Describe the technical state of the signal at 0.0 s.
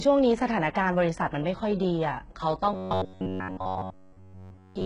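At 0.0 s the speech already shows heavy damage, likely from HE-AAC compression running the whole clip: the treble above the crossover is rebuilt from copied lower bands, so s sounds turn gritty and metallic rather than simply dull. The bitrate is around 12 kbps.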